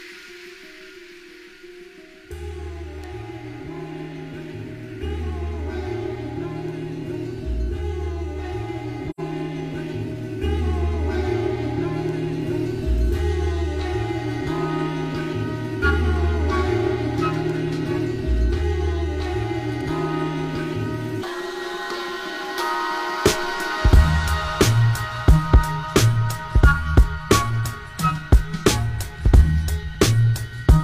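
At 9.10 s the sound drops into a short gap that lasts to about 9.20 s. This is AAC frame loss with muting. The decoder had no data for this stretch and replaced its spectrum with silence. The hole spans roughly 85 ms, which fits two lost frames. Because the decoder's windows overlap, the level fades down into the gap and back up out of it. The result is a soft-edged dropout rather than a hard cut.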